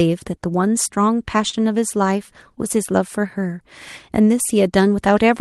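At 1.49 to 1.55 s there is a short concealed packet loss: about 40 ms of the call's audio failed to arrive in time for decoding, and the receiver synthesised roughly 34 ms of substitute signal by extending the preceding sound before crossfading back into the real stream. It is heard as a brief smear in the speech. The call path itself, heard as Opus-style coding with the top end rolled off above 12 kHz, carries through the gap.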